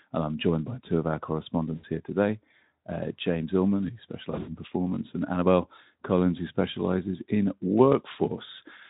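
At 1.76–1.85 s and 4.31–4.49 s, VoIP packet loss concealed by the speech codec stretches the sound into a fading buzz rather than silence, and it stays weak afterwards.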